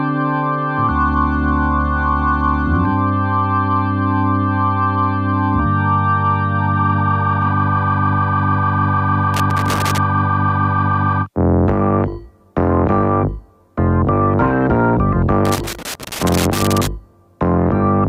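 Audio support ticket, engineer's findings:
Loose connector crackle at 9.34–9.98 s and 15.45–16.87 s. Irregular bursts of crackle and scratching, 0.64 s and 1.42 s long. Probable component: worn or dirty cable contact. A moving contact makes and breaks rapidly, chopping the signal.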